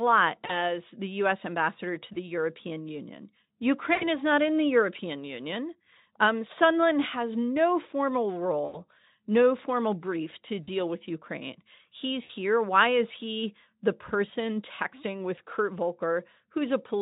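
VoIP packet loss concealed by the speech codec breaks the speech seven times: 0.45–0.63, 2.13–2.17, 3.93–4.05, 8.65–8.79, 10.63–10.69, 12.23–12.30 and 15.35–15.39 s. Each time, 20 to 80 ms of audio went missing. The decoder stretched the last sound across the gap. It becomes a buzzy tone or a coloured noise that fades. The voice stays weak for a moment after each gap.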